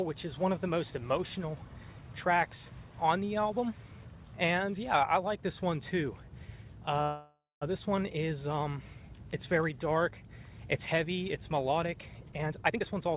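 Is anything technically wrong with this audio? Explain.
Yes. There are two faults. Both ride on a narrowband call path whose band stops at 4 kHz, which fits G.711 mu-law at 64 kbps.

From 7.02 to 7.63 s there is a call audio freeze. The last sound is stretched into a fading buzz or hiss, and the final 200 ms are silent. The likely cause is packets stalling in transit until the jitter buffer ran dry. Nothing is lost. When the audio resumes, it picks up where it stopped, now about 0.59 s late.

From 12.31 to 13.09 s there is a jitter buffer speed-up. The buffer held too much audio, so the receiver trimmed short pitch-period slices over and over, roughly half a second in total. The sound plays at 162% speed with its pitch unchanged. It comes across as rushed.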